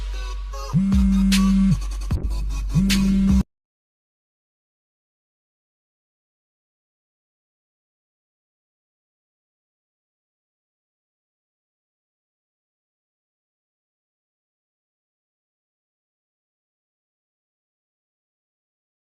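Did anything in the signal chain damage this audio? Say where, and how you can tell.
Yes. A call bitrate drop hits the codec stage from 2.16 to 4.31 s. The sound turns coarse and muffled, with the top end cut away, which fits a fall from about 96 to 16 kbps that holds at its lowest for about 2.1 s before the encoder recovers.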